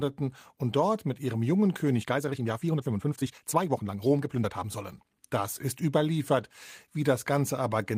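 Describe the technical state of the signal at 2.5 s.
At 2.5 s the speech is inside a time-stretched section from 1.99 to 4.77 s. It plays 1.62 times faster, but the pitch is unchanged. The pace jumps abruptly, and the passage sounds rushed. This is likely from software dropping short slices of audio to shorten it.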